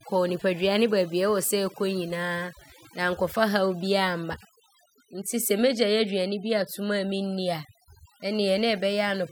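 Overdone noise removal runs through the whole recording. A noise reduction stage was set too hard. Frequency bands near its noise estimate were pulled down or cut, taking quiet speech detail too. Pauses fall to near silence with twinkling specks.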